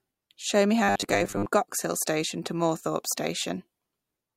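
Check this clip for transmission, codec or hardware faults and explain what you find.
One fault: robotic sound from repeated short buffers, 0.84 to 1.46 s, a rigid 100 Hz metallic buzz, likely from repeating a roughly 10 ms buffer over most of that stretch. Unlike simple stutter, its pitch stays fixed.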